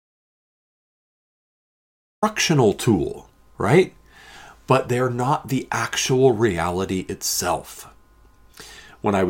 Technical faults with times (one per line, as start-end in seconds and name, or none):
0.00-2.22 audio dropout to silence